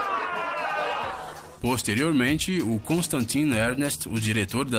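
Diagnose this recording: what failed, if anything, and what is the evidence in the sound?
Clock drift between sender and receiver runs through the whole recording, and it belongs to the network and jitter buffer stage. The sending device's sample clock is running fast, by roughly 4 percent, so audio arrives slightly quicker than the receiving end consumes it. The jitter buffer steadily overfills, and the receiver must keep discarding material to hold latency in check. That ongoing mismatch causes the hiccups heard across the clip.

Repeated timing corrections occur from 0.32 s to 4.49 s, where the sound moves at about 105 percent of its natural pace, with a faintly uneven, pushed tempo and small skips at irregular intervals. Each correction is the receiver trimming a short slice of audio to drain the overfull buffer. Because the sender stays fast, every edit removes material rather than repeating it, and the cuts keep recurring without settling.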